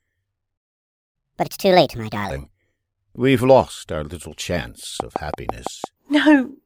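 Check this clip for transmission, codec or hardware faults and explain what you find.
The clip has three faults: a playback stall, a sped-up catch-up right after it, and a short train of clicks near the end.

The playback stall runs from 0.57 to 1.16 s. The speech simply stops for about 0.57 s and the output goes silent. The player most likely ran dry of data or had its thread blocked, so nothing reached the output until it recovered. You hear a clean gap in mid-flow. The sound then carries on where it left off.

The catch-up at higher speed follows at once, from 1.16 to 2.30 s. The player works through its backlog at 1.5 times normal speed by resampling. That pushes the pitch up by around seven semitones along with the tempo. The speech sounds hurried and chipmunk-like for just over a second. Then speed and pitch drop back to normal once the lost time is regained.

The train of clicks starts at 5.00 s, just after "lost our little chance", and ends at 5.85 s. 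Roughly seven clicks arrive at a steady pace of about six per second. They are alike in shape and stand out strongly, peaking around 15 dB above the speech. The likely source is interference from nearby equipment or a faulty connection or power supply injecting repeated pulses. It is heard as regular ticking laid over the speech.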